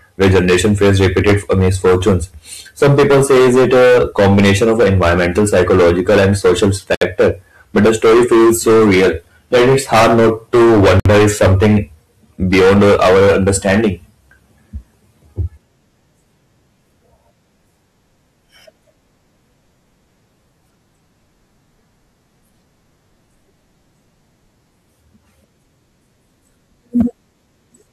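A harsh fuzz sits on the loud parts of the speech from 0.21 to 2.16 s and again from 2.82 to 7.31 s. This is hard clipping: the signal is driven about 15 to 17 dB past what the stage can pass, so every peak is sliced flat and the squared-off tops spray harmonics high into the spectrum. Inside that second stretch, at 6.95 s, the sound drops out abruptly for 69 ms, its edges blurred, and then resumes exactly where it left off. This is a gap at a join of encoded pieces. Two separately encoded segments were spliced without trimming, so the start-up delay and end-of-frame padding from each encoder run were left in as silence. The same fuzzy clipping returns from 7.76 to 9.10 s at about 16 dB over, and from 9.54 to 11.77 s at about 18 dB over, the most severe stretch. Within it, a second join gap cuts out 58 ms of sound at 11.00 s. Clipping at about 14 dB over follows from 12.52 to 13.88 s. Near the end, at 27.00 s, a brief crackle comes from a much lighter overload of about 4 dB.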